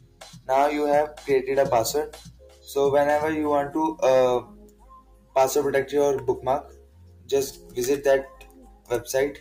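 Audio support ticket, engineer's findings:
Noise suppressor applied to music or sounds, present for the whole clip. A speech-tuned noise suppressor treats sustained tones and ambience as noise, so held material and tails sink while attacks pass. The result is pumping and thinning, with level swings of around 15 dB.

Sound cut by the noise suppressor at 0.00–0.49 s, 2.09–2.72 s, 4.42–5.36 s, 6.61–7.30 s, 7.51–7.77 s and 8.27–8.90 s. The suppressor gain collapses on steady or decaying passages, producing drops of about 15–16 dB, except about 8 dB at 7.51 s.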